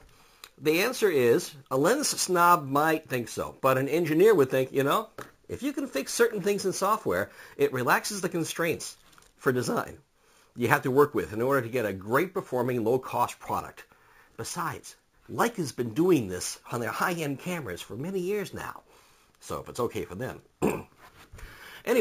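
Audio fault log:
Throughout, imaging from sample-and-hold upsampling: each sample was simply repeated going up to 44.1 kHz from what sounds like a 16 kHz original, so mirrored copies fill 8 to 16 kHz at about 18 dB down. You get a metallic fizz tracking the level, with the lowest copy moving against the pitch.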